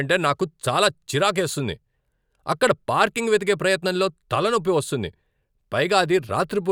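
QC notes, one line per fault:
No technical faults are audible in the signal at any point in the clip.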